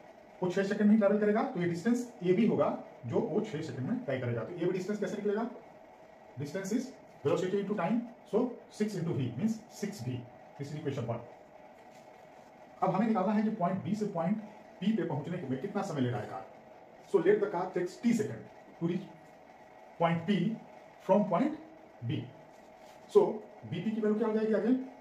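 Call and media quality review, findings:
No audible faults found.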